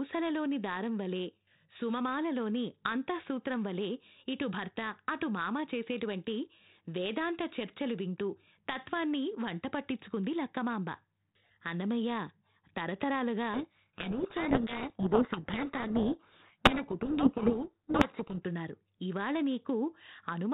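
Speech over a 32 kbit/s G.726 link, with the light band-limited hiss that rate leaves; from 13.54 to 18.41 s a codec payload misread buries it in harsh distortion, the decoder taking G.726 code words in reversed bit order, unlike steady low-rate hiss, which merely tracks speech level.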